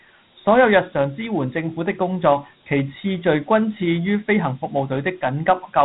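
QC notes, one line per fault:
throughout, Dialogic VOX ADPCM: nothing above 3.9 kHz, with gritty hiss tracking the speech. It fits 4-bit ADPCM at 32 kbps, unlike a plain low-pass's clean narrowband sound.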